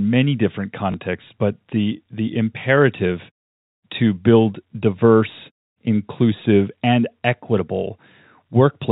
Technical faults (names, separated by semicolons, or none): packet loss with last packet repeated